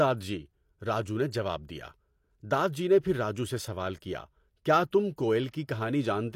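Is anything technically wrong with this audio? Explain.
Yes, there is pre-echo on the speech at 4.91 s and from 5.50 to 5.53 s. Block-based coding spreads quantisation noise ahead of sharp attacks, so a brief hiss of about 16 ms, then 30 ms, smears each onset.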